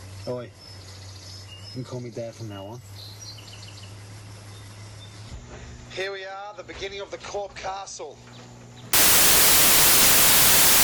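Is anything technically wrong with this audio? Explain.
Yes. Samples built from the wrong bytes, from 8.93 s to the end at 10.83 s: each sample's bytes are combined wrongly, so rapidly changing low bits dominate, producing broadband noise in place of the sound.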